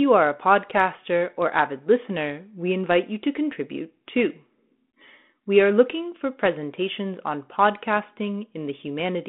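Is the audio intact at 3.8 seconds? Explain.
Yes, the audio is intact at 3.8 seconds, with only the expected band-limited telephone sound of the 32 kbit/s G.726 ADPCM path and no fault at that moment.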